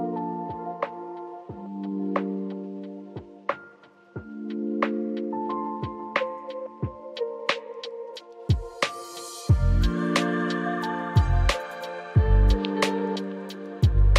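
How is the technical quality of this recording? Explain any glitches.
No technical faults or glitches are audible anywhere in the recording.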